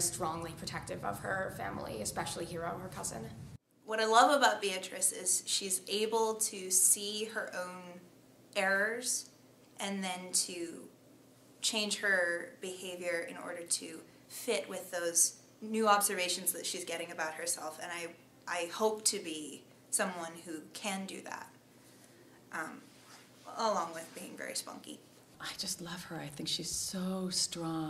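Nothing stood out as a technical fault on listening.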